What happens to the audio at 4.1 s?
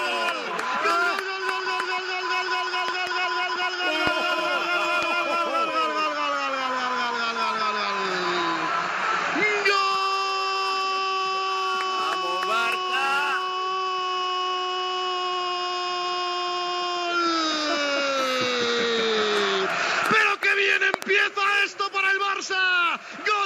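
A single loud pop, far louder than the surrounding sound, hits between 4.07 and 4.09 s. It is likely a voltage spike from a plug, switch or static. Unlike a dropout, the sound carries on beneath it.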